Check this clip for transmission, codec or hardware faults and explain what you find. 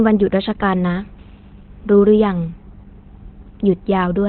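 One codec fault runs through the whole clip. From start to finish the speech sounds muffled, hoarse and thin, with nothing above about 4.3 kHz, so it has a narrowband, telephone-like quality. This is likely Opus compression at a very low rate, which fits something around 12 kbps. At rates that low the encoder switches to its SILK speech mode and cuts the bandwidth to narrowband. It models the voice coarsely instead of coding it in detail, which leaves heavy damage across the clip.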